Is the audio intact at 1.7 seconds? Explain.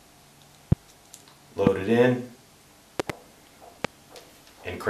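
No, there's a loud pop right there, running from about 1.67 to 1.69 s, so roughly a 24 ms hit. It's a single sharp click-thump that jumps something like 15 dB above the surrounding sound, which keeps going underneath it. What you're hearing is a sudden voltage step or spike landing on the signal, likely from a plug, switch, static discharge or a driver glitch, then shaped by whatever circuitry sits downstream.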